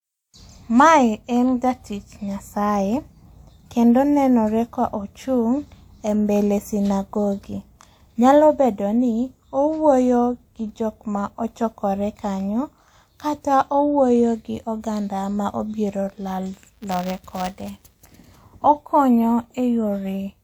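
Speech with buffer tearing from 16.54 to 18.01 s: a robotic 200 Hz buzz, as the writer and hardware pointers cross each period and splice in stale audio.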